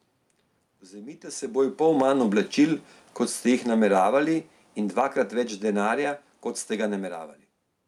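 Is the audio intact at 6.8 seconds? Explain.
No, at 6.8 s you're inside a stretch of automatic gain falling, from 1.81 to 7.27 s: the AGC pulls gain down by about 8 dB, so speech and room noise sink together.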